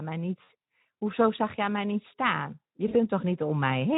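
Twice in the speech there's VoIP packet loss concealed by the speech codec: first from 0.43 to 0.50 s, then from 2.88 to 2.96 s. Each time the decoder had nothing to play for roughly 60 ms, which fits about three lost frames, so it stretched its last pitch and filter into a buzzy tone or coloured noise that fades. The voice stays weak or distorted just after, since each rebuilt frame leans on the one before. The Speex coding itself sounds clean.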